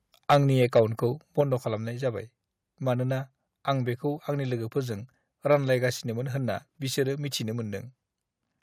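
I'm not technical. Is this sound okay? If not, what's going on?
No. Microphone overload: the microphone's input was likely set too high, so the loudest moments hit the converter's limit and their tops got sliced off. You hear this as a harsh, crackly edge from 0.3 to 0.8 seconds, and again briefly from 5.51 to 5.54 seconds, right after "आं बेखौ आंनि लोगोफोरजों".

Microphone volume stepped down: the calling software likely reacted to that early distortion by turning the microphone down in one jump. At 1.41 seconds, just before "खालामनाय जाबाय", the voice and background suddenly become quieter.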